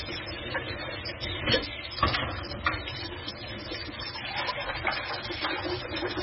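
MP3 compression runs throughout the clip. The sound stops dead at about 5.5 kHz, which points to a very low bitrate, around 16 kbps. The likely cause is an encoder starved of bits. It cuts away the treble at a fixed frequency and discards weak frequency components, which drop in and out from one frame to the next. That heavy damage leaves the sounds dull, with a watery, swirling texture and blurred onsets.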